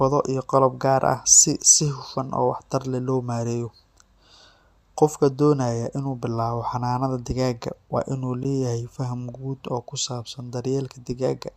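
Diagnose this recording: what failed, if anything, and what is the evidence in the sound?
Gap between stream segments, at playback. A hard-edged 13 ms silence falls at 8.43 s, before "leeyahay faham guud oo". Segment timestamps leave a hole, filled with silence.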